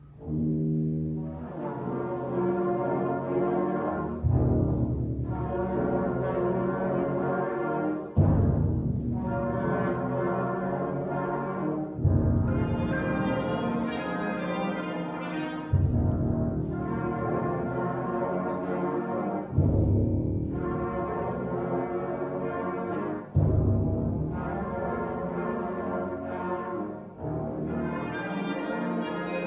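Nothing stood out as a technical problem on listening to the audio.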